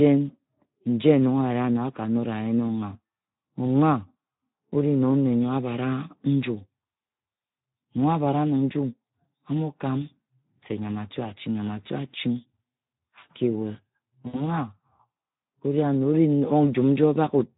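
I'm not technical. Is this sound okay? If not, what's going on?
No. Speex codec, throughout: this older voice-chat compression has too little data to describe the voice, so the speech sounds noisy and hoarse.

VoIP packet loss concealed by the speech codec, from 14.27 to 14.44 s: about 60 ms of audio went missing in transit. The decoder guessed by stretching the last sound into a fading buzz or noise, and the speech stays distorted briefly afterwards.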